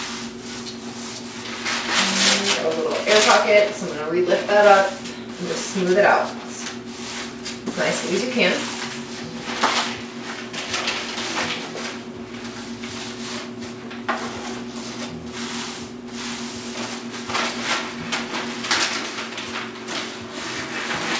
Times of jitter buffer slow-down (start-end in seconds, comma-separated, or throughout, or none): none